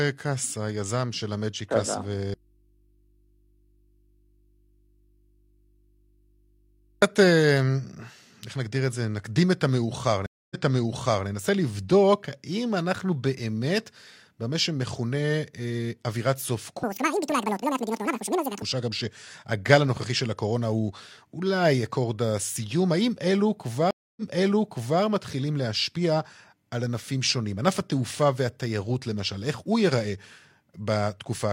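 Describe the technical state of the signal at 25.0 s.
At 25.0 s the signal is inside a stream reconnect, spanning 23.91 to 25.02 s. The connection dropped and the player went silent for about 0.26 s. A fresh decoder then restarted mid-stream. Playback resumes about 0.85 s earlier, repeating audio, with the first frame faded in.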